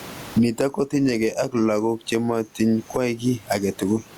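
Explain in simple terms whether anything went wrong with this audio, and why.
Gain pumping runs through the whole recording. The likely cause is a microphone level set far too high, with an automatic limiter clamping it down hard every time the speech gets loud and letting it back up in each pause. You hear this as a large swing in level. The speech itself sounds squashed, with loud and soft parts pushed close together.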